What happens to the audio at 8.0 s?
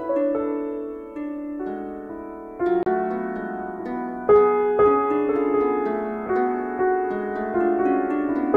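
Nothing goes wrong at 8.0 s: the music carries on intact through that moment, with only the light, steady lossy compression that runs through the whole clip.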